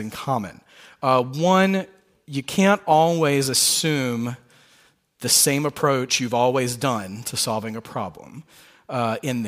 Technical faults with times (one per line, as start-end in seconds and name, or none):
none